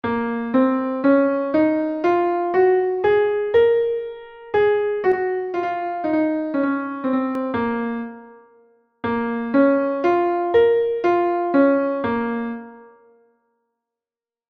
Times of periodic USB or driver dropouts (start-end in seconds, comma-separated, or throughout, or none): none